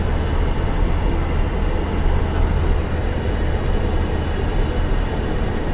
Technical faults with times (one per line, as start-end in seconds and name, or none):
none